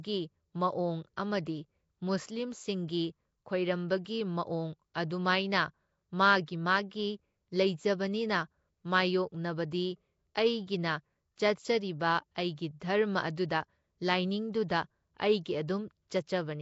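Nellymoser compression, throughout: a plainly audible hissy halo, smeared underwater tone and nothing above 7.7 kHz, likely from Asao filling starved bands with noise.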